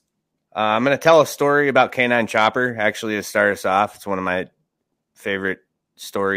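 Speech clip, no technical faults.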